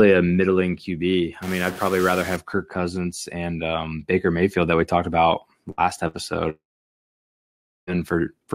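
From 1.42 to 2.36 s a distortion coats the speech and even fills the pauses with noise, which points to a stuck bit, likely one converter bit held fixed. Plain clipping would leave the gaps clean. At 5.71 to 5.81 s and again at 6.08 to 6.17 s, two bursts of packet loss each replace about 60 ms of speech with a held, fading continuation before the audio jumps ahead. From 6.50 to 7.90 s a long network dropout, likely a stall in delivery, briefly stretches the last sound and then leaves roughly 1.3 s of silence. About 1.4 s of speech never returns, which separates it from the brief bursts.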